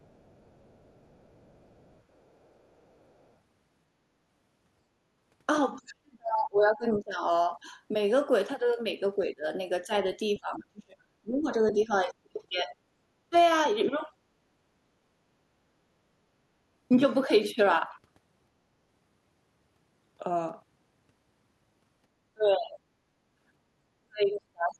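Right from the start, 0 to 3.33 s, there's a faint second voice under the speech, very low, around 35 dB below the talker. That's the other side's voice leaking through: the far end is likely playing on a loudspeaker and the echo canceller isn't scrubbing all of it out of the mic. It comes back much more clearly at 11.70 to 11.84 s, a short scrap only about 15 dB under the talker.

The bigger issue is speech suppressed in double talk, the talker's own voice being pulled down while the other side is talking too. The canceller likely can't tell the near voice from the loudspeaker echo, so it attenuates everything. It hits at 5.78 to 7.73 s, with roughly a second and a half affected and dips as deep as 35 dB. Then 9.19 to 12.74 s, about two seconds in total and up to 25 dB down, overlapping that louder leak. At 13.30 to 13.34 s there's a tiny 15 dB notch. At 22.34 to 22.78 s it drops about 25 dB. 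From 24.01 s to the end the talker sinks by as much as 40 dB.

At 23.06 to 23.17 s the room tone ducks by about 10 dB for roughly a tenth of a second and then recovers. That's background gated by the echo canceller: it clamped the mic hard while the loudspeaker played and then let go.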